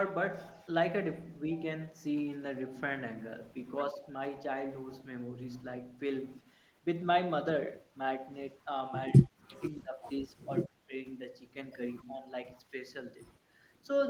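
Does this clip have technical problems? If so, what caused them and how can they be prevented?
Yes. The speech dips in level four times. At 3.93 to 4.12 s the drop is slight, a few decibels. Deeper cuts follow at 9.21 to 9.62 s, 9.82 to 10.04 s and 10.26 to 10.93 s, each reaching about 20 to 25 dB. This is likely speech suppressed in double talk. The echo canceller heard both sides at once and turned the near talker down with the echo. A canceller with better double-talk detection would prevent it.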